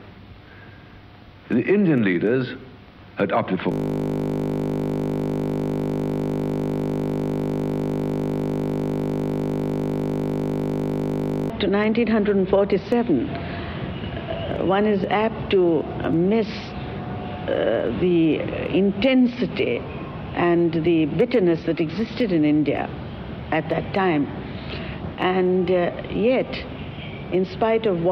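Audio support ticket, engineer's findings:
System hang loop, 3.72 to 11.50 s. Steady 50 Hz buzz. Host or driver froze; hardware replayed one 20 ms ring-buffer segment repeatedly.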